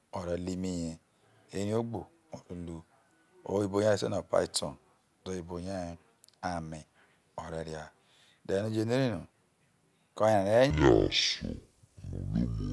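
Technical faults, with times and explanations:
10.70 to 12.73 s, wrong sample rate: the speech suddenly drops a full octave and slows to half speed. The samples are being read out at half the rate they were captured at, which fits 48 kHz audio played at 24 kHz. Pitch and tempo fall together.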